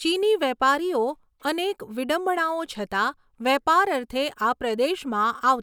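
No technical faults can be heard at any point in this speech recording. There are no events to place in time order, so there are no times to give.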